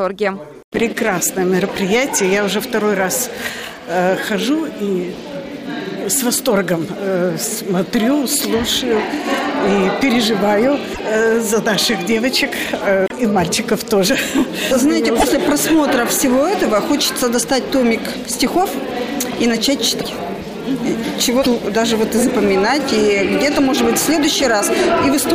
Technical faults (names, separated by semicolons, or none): broken MP3 bit reservoir